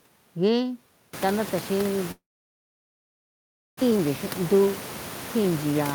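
From 2.11 s to 3.83 s the sound cuts out in a way that is likely a long network dropout. The last sound is carried on briefly as a fading buzz or hiss, then about 1.5 s of near-silence follows, with only a low steady noise left. The room noise rose by about 25 dB around the one-second mark and sits about 15 dB below the speech. When the speech resumes, roughly a second of it is missing rather than delayed, and the stream now runs with something like 0.7 s of extra buffering.

From 3.91 s to 4.67 s a jitter buffer speed-up follows as the receiver works off that accumulated delay. It cuts short pitch-period-length slices from the speech repeatedly, trimming around 50 ms in total. Playback runs at about 106% speed with the pitch unchanged, so the speech sounds slightly rushed over that stretch.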